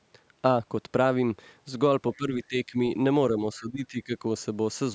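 From 2.17 to 2.78 s and again from 3.37 to 4.23 s, the speech dips by roughly 15 dB in patches, likely speech suppressed in double talk: the echo canceller mistook the talker for loudspeaker echo and turned both down together.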